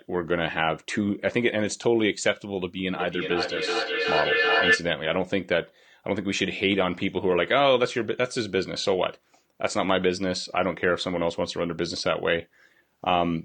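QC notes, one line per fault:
2.95–4.91 s, feedback echo between two devices: a second device in the room on the same call plays back what the first microphone sent, that microphone picks it up again, and neither echo canceller removes sound its own device didn't play. Each word returns roughly every 0.4 s, thinner and more ringing on each pass, and the loop is loud enough that the repeats build up rather than fade, peaking at about 1 dB above the speech itself.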